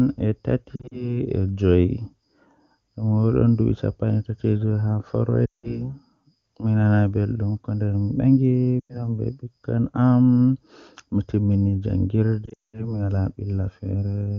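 Lost AMR speech frames occur at 0.76, 5.45, 8.80 and 12.45 s. The AMR-WB decoder repeats the last good pitch and vocal-tract settings with falling gain, so speech briefly warbles and smears. The 200 ms run near 12.5 s fades quickly to silence before speech returns rough.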